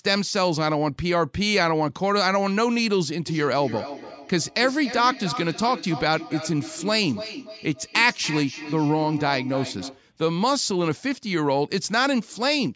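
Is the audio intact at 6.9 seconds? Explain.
No, 6.9 s falls right inside a stretch of feedback echo between two devices that runs from about 3.27 to 10.07 s. Two devices on the same call are sitting near each other, so one device's speaker plays sound that the other device's microphone captures and sends around again. Each echo canceller only removes its own playback, so the loop goes unchecked. You hear every word come back roughly a third of a second later, thinner and ringier, peaking about 11 dB under the speech.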